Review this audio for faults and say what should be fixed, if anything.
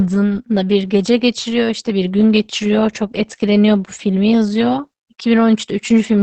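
The whole clip has Opus voice compression: SILK mode at wideband, nothing above 8.7 kHz, with heavy damage from coarse excitation coding, so the speech sounds muffled, hoarse and a bit robotic. That fits roughly 10 kbps with 20 ms frames. To prevent it, encode at a higher bitrate, or send the uncompressed original.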